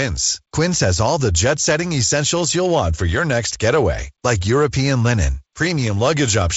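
Speech carried over G.722 wideband telephone coding at 48 kbit/s, with content ending near 7.7 kHz, light coding damage, and the slightly noisier lower band that this reduced rate leaves, shows no technical fault.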